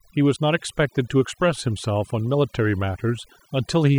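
Overdone noise removal affects the speech from start to finish. A noise reduction stage was pushed too hard. It cuts individual frequency bands deep whenever their level sits close to its noise estimate. Soft parts of the voice fall under that threshold and are cut too. Between phrases, the background drops and breaks up into twinkling, warbling specks.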